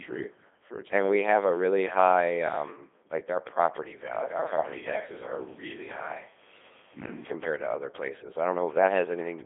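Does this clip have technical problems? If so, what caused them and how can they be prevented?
Yes. The whole clip has gone through a Codec 2 vocoder, and it sounds heavily damaged: robotic and buzzy throughout, with a narrow band from about 300 Hz to 3.6 kHz and nothing above 3.8 kHz. Codec 2 doesn't keep the waveform. It sends only pitch, voicing, energy and a rough spectral shape, then rebuilds the speech from sine waves. The coarseness here fits the 2.4 kbit/s mode. To prevent it, record or share the original audio instead of the digital-radio stream.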